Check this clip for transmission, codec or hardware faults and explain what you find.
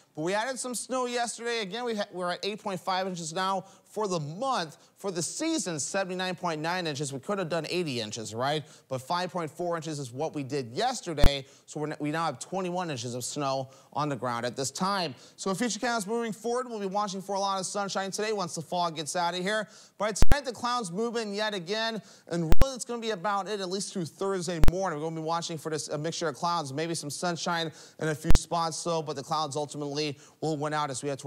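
The clip has one fault: invalid numbers at full scale, in five blocks. They occur at 11.24–11.26, 20.23–20.32, 22.52–22.62, 24.64–24.68 and 28.31–28.35 s. A calculation returned infinite or invalid values, which were pinned at maximum level. The 23 ms block is one loud bang. The 46 ms and 93 ms blocks give a pop at each edge, with a hole between. These lengths fit 1024-, 2048- and 4096-sample blocks.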